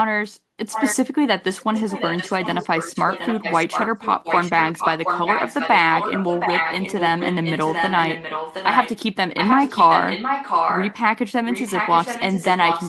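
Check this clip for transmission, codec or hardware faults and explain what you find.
There's an echo leak running through most of the speech.

From 0.7 to 0.96 s, 1.6 to 8.99 s, 9.36 to 10.97 s and 11.45 s to the end, a copy of the speech returns 720 ms late, likely from a far-end loudspeaker whose echo canceller let it through. It's about 5 dB under, and roughly as loud in the third stretch.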